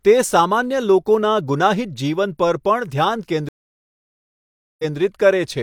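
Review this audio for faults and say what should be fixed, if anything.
From 3.49 to 4.98 s the speech goes silent for 1.3 s, then resumes 186 ms earlier than where it stopped: a stream reconnect, restarting the decoder from a resent burst. A deeper client buffer, with reconnection that resumes at the exact stream position and discards repeated data, would prevent this.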